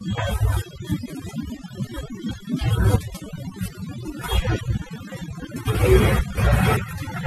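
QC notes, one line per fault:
Throughout: overdone noise removal. The speech was put through noise reduction set too hard. Frequency bands near the estimated noise level are pulled down or switched off, and the quieter parts of the voice go with them. Gaps between phrases fall to near silence with twinkling specks. The voice loses its softer components, which keep being switched off as they are mistaken for noise.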